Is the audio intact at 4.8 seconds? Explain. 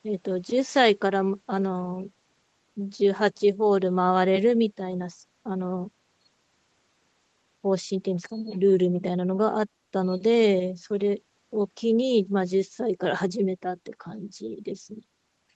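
Yes, at 4.8 seconds the speech is intact, with no dropout, glitch or other fault at that moment.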